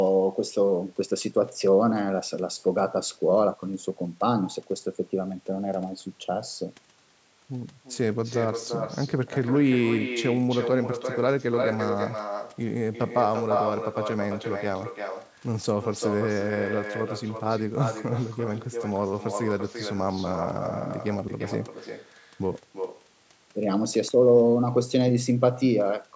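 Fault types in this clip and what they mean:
Echo with no canceller: The far end plays the call through a loudspeaker, and its microphone sends it straight back unremoved. Every phrase here returns roughly a third of a second later. The copy sits about 6 dB down, and thinner.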